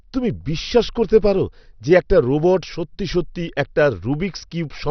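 Throughout the speech, nothing survives above 6.2 kHz, and what remains gurgles and grains as upper sub-bands flicker on and off. That band-switching sets it apart from a plain low-pass filter and points to heavy MP2 compression, likely at about 48 kbps.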